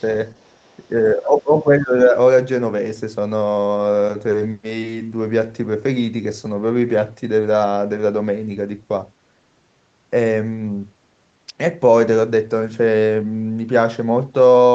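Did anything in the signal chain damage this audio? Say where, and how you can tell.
Yes. From 0.37 to 0.88 s a second voice sits faintly underneath the speech, far quieter than the talker, like a distant scrap of conversation. The stage is call processing: this is the other side's voice leaking through. The far end was most likely playing on the talker's loudspeaker, and the echo canceller left a small residue of that playback in the microphone signal instead of removing it entirely.

Right after, from 0.95 to 2.15 s, the talker's own speech sinks and thins in patches. It drops by roughly 15 dB at its deepest, for around a second in total. This is speech suppressed in double talk, again in the call-processing stage. With both sides likely talking at once, the echo suppressor could not tell the near talker from the loudspeaker echo, so it pulled the whole microphone signal down.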